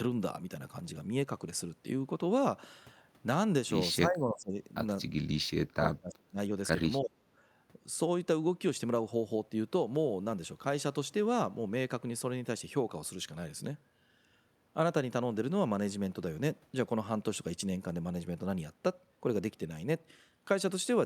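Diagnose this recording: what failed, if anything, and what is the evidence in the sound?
The speech level drops sharply three times. The first dip runs from 4.05 to 4.58 s, about 20 dB down. The second runs from 5.39 to 6.51 s, about 30 dB down. The third is brief, from 7.02 to 7.16 s, also about 30 dB down. The stage is call processing. The likely cause is speech suppressed in double talk. With both sides active, the echo canceller mistook the talker for echo and attenuated everything.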